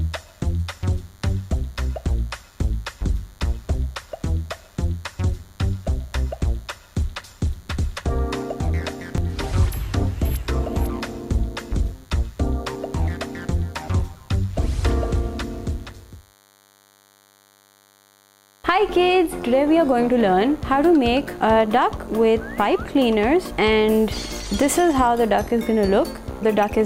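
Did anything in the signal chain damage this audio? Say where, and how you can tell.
Yes, in the analogue stage. A DECT cordless phone buzz runs through the whole clip, from start to finish. It is a steady buzz at 100 Hz with a stack of harmonics above it, sitting roughly 35 dB below the sound. A nearby DECT handset or base transmits a short radio burst every 10 ms. Unshielded analogue wiring or an input stage picks up those bursts and rectifies them, which turns each burst into an audible pulse at that rate.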